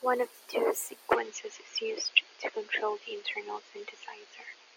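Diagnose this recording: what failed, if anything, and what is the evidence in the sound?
Right after "of the two", at 1.13 s, the speech suddenly loses everything above 6.8 kHz and stays dull to the end. There's no gap and no real level jump, just a faint new background noise well under the voice. The input likely switched to a poorer device at the driver level.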